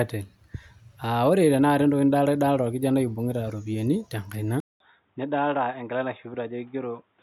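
Input switched to a poorer device at 4.60 s, after a 200 ms gap: the speech likely moves to another microphone or headset call profile, losing everything above 3.8 kHz, dropping roughly 5 dB and gaining faint new noise, sounding dull and boxy to the end.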